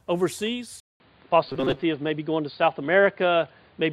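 At 0.8 s the sound drops out for 200 ms, then returns dull and boxy. The level shifts by about 5 dB, and a faint new noise floor appears. This is likely an input switched to a poorer device.

From 1.49 to 1.85 s a rigid metallic buzz at 134 Hz sets in. It is robotic sound from repeated short buffers, likely about 7.5 ms chunks replayed for roughly half the audio.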